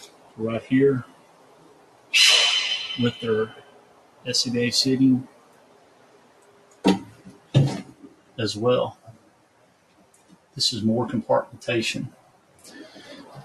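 A noise suppressor designed for speech has been left running on this non-speech audio. It treats steady tones, ambience and reverberant tails as noise, so the level swings by around 20 dB as it clamps down and releases. Onsets get through while sustained parts sink, and the sound pumps and thins. On a spectrogram, attacks appear as intact vertical streaks while the horizontal bands of held content and decays fade early. On the waveform, the envelope sags after each attack instead of holding. The clearest spots of sound cut by the noise suppressor fall at 0.08–0.37 s, 1.07–2.13 s, 3.61–4.25 s, 5.28–6.84 s, 7.15–7.53 s, 8.02–8.38 s, 8.95–10.56 s and 12.16–12.64 s, each dropping by about 7 to 8 dB at its deepest. The longest, near 5.3 and 9.0 s, last roughly one and a half seconds. There the suppressor mistakes the held or fading material for background and pulls it well below the surrounding level, leaving visible troughs in the waveform and gaps in the spectrogram where the tails should continue.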